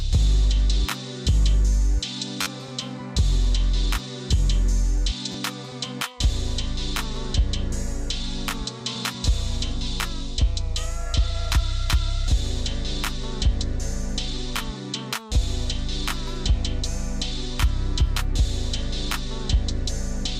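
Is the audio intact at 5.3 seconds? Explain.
No, there's a repeated buffer from about 5.32 to 5.34 s. New audio didn't reach the output in time, so the device replayed the last chunk it had, a slice about 10.7 ms long that fits a 512-sample buffer. That slice goes out twice more, so the same fragment plays three times in a row with a hard join at each repeat. Because the chunk is so short, it comes across as a quick click or tiny buzz, and about 20 ms of the real audio never gets played.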